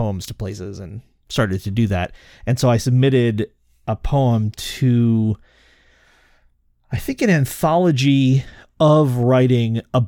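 No technical faults are audible.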